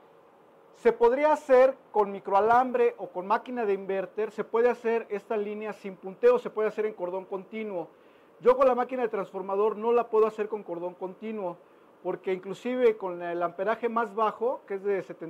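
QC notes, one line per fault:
No faults found. Nothing in the audio calls for a QC entry.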